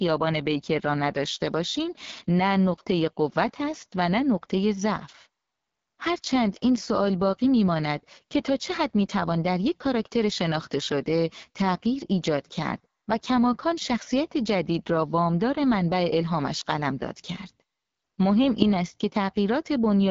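Throughout, the speech passed through the AMR wideband (HD Voice) codec at a low rate, likely its 8.85 kbit/s mode, leaving it rough and raspy, with nothing above 7.5 kHz.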